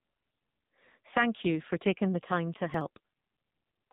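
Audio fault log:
Throughout: AMR narrowband mobile codec. The speech passes through a low-rate mobile speech coder at around 6.7 kbps, and heavy damage follows: nothing reaches above about 3.8 kHz, and the voice turns buzzy and synthetic. A vocal-tract model with very few excitation pulses per frame rebuilds it.
2.74 to 3.27 s: processor overload crackle. Right after "taking the time to", a gritty tearing rides on the speech for about half a second. Processing deadlines are being missed repeatedly, and each late buffer is skipped rather than held. The short gaps fit buffers of roughly 10 ms, with roughly seven dropped across the stretch.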